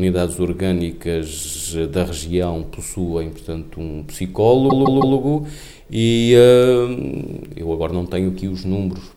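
There's a stutter from repeated frames at two spots. From 1.43 to 1.63 s a chunk of about 104.5 ms plays two extra times, adding 209 ms. From 4.69 to 5.16 s a 156.7 ms chunk plays three extra times, adding 470 ms. The compressed frames were written or sent more than once, so the decoder just replays them and the audio runs long by the repeated time.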